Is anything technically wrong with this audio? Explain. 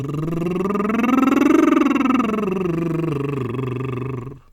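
No, nothing technical gets in the way here; the music just rolls along from the first moment to the last without a hitch.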